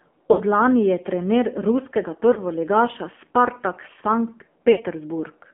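Speech here, squeezed through the AMR narrowband mobile codec. The band sits at roughly 200 Hz to 3.4 kHz, and the voice is plainly buzzy and synthetic, which fits a low AMR-NB mode around 7.4 kbps. There are also lost AMR speech frames at 0.32–0.41 s and 4.72–4.81 s, each a 60 ms gap where the decoder stretches the last sound and lets it fade before recovering a bit rough. A shorter 20 ms dropout at 2.34–2.40 s gives just a quick dip.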